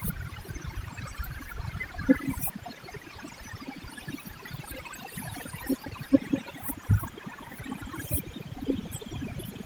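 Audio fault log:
Throughout: overdone noise removal. A noise reducer set far too strong pushes individual frequency bands down or out wherever they sit close to its noise estimate, so the background collapses to near silence dotted with twinkling specks, and the quieter parts of the speech are cut away with it. Unlike low-rate codec burbling, the damage follows the noise floor rather than the frame rhythm, and the light Opus coding reaches up to about 20.5 kHz.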